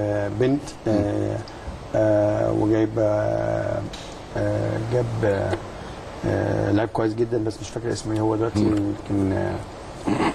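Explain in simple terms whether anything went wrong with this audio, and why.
Nothing went wrong with this audio, because no technical fault can be heard anywhere in it. There is no moment in the recording that needs explaining.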